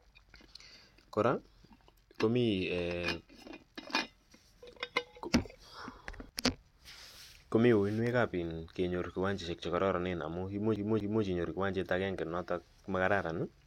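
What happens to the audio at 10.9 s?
The speech hits a CD stuck on one turn from 10.76 to 11.24 s, just after "che kararanen amu imuch". A 0.24 s slice plays twice, with a brief mute at each skip back.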